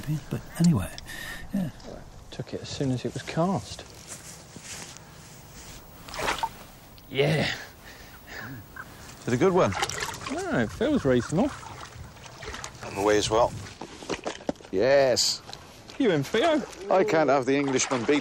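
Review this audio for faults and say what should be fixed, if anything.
Nothing here needs fixing, as no faults are audible anywhere in the recording.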